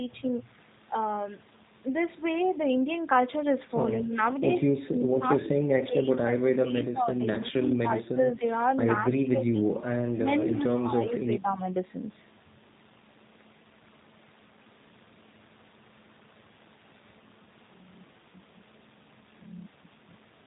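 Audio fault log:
Throughout, G.729 codec: the speech is rebuilt from a vocal tract model, a pitch predictor and a few pulses per frame, at a rate that fits 8 kbit/s, so nothing above 4 kHz survives and the speech sounds plainly rough, buzzy and synthetic.
7.40–8.44 s, speech suppressed in double talk: the speech dips by around 15 dB and breaks up for roughly 0.7 s in total across this span, likely an echo canceller confusing the talker with loudspeaker echo while both sides spoke and turning everything down.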